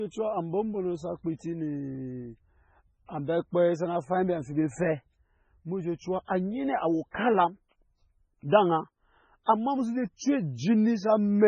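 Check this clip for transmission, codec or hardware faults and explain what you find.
There's one fault, present through the whole clip: MP3 compression, heavily applied. It sounds like the likely result of a very low bitrate encode, something around 16 kbps. Short of bits, the encoder has cut everything above 9.4 kHz and drops weak frequency lines from frame to frame, so the speech comes across dull, watery and swirly throughout.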